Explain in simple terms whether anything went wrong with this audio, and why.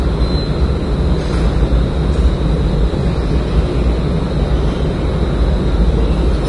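Likely Vorbis compression squeezed the file hard, throughout: nothing survives above about 10.6 kHz, so the sound turns dull, hissy and grainy, with smeared attacks.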